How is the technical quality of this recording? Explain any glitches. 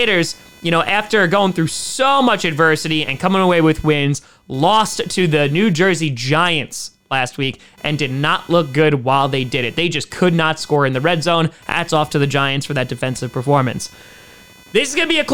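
The speech carries a faint buzzing chirp under it for the whole 15 seconds, pulsing at around 500 times a second and sitting roughly 30 dB below the voice. This is computer activity noise: the processor, graphics card or mouse load shifts the ground shared with the audio circuit, so the buzz tracks the machine's activity rather than the speech.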